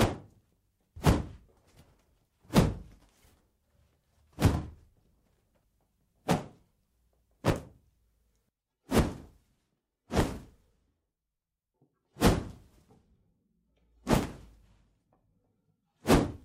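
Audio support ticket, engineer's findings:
Dropped buffer (overrun) at 14.17 s: capture buffer likely not read before hardware overwrote it. Roughly 10 ms skipped, heard as an abrupt jump in the sound.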